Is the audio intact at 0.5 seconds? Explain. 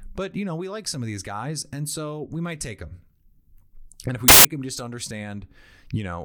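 Yes, the speech at 0.5 seconds is intact, with no dropout, click, distortion or other fault at that moment.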